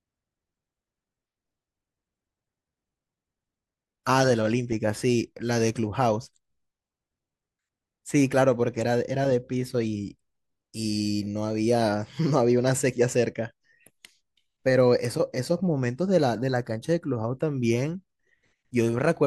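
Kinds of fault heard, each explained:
No technical faults heard.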